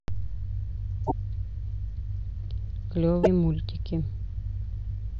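Damaged data in the compressed stream hits this speech at 1.03 to 1.12 s and again at 3.20 to 3.27 s. Each time, corrupted bytes make the decoder misread the frames and lose sync, producing a short glitch before decoding resumes.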